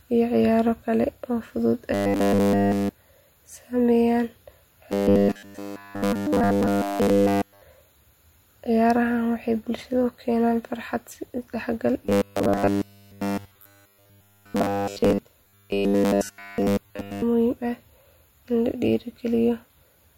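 Robotic sound from repeated short buffers appears after "kale oo fudud" at 1.94–2.91 s, then at 4.92–7.62 s, 12.06–15.19 s and 15.44–17.23 s. The speech becomes a rigid 100 Hz metallic buzz, likely from a roughly 10 ms buffer replayed continuously.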